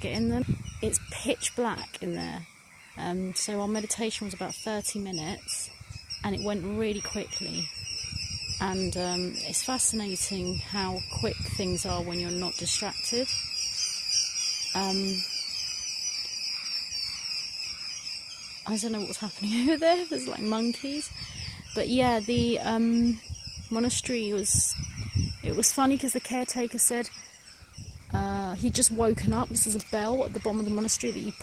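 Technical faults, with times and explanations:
25.50–31.43 s, adaptive stream at a lower bitrate: the quality suddenly drops, with heavier codec artefacts, yet no gap. The player switched to a leaner stream as the connection slowed, fitting a drop from 64 to 16 kbit/s Opus.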